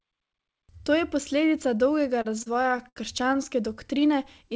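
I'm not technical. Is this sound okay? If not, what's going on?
No, there's a stutter. From about 2.22 to 3.37 s, just after "je posledica dolgega", the speech hits repeated stalls (stutter): the audio kept arriving late, so the call stretched the last sound a dozen or so times, each under a tenth of a second. Nothing's lost, but it drags.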